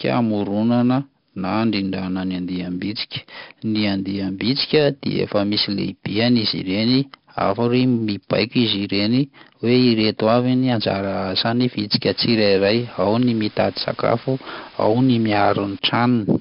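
4-bit ADPCM compression runs through the whole speech clip: each sample is coded as a small step from a predicted value, and the coarse, adaptive step leaves heavy gritty hiss riding on every loud syllable, with harshness on sharp onsets. Nothing is present above 5.3 kHz, giving a dull sound that fits a rate near 44 kbps.

Low bit depth with dither runs from 12.02 s to 15.79 s: the audio is held to what sounds like 6 bits, and the dither added before rounding turns the error into a steady, even hiss roughly 20 dB under the signal, without distortion.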